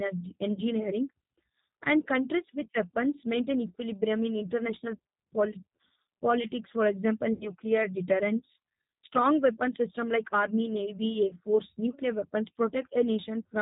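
Speech carried over a G.729 codec at 8 kbit/s throughout, so everything above 4 kHz is gone and the voice has that plainly rough, synthetic edge. There's also VoIP packet loss concealed by the speech codec at 0.53 to 0.62 s, 7.33 to 7.52 s after "politics for example", and 11.29 to 11.36 s between "system like army navy" and "force nuclear weapons". In each case the decoder stretches the last sound into a fading buzzy tone or coloured noise over gaps of 40, 80 and 20 ms, which fits two, four and one lost packets.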